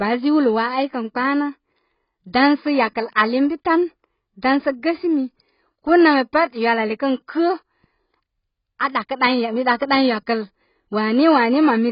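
Throughout, the speech sounds dull and warbly, likely from heavy AAC compression at a very low bitrate. A spectrogram shows a hard ceiling at 5.3 kHz.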